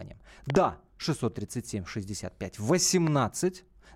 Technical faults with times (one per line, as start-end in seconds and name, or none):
0.50-0.57 loud pop
3.07-3.09 loud pop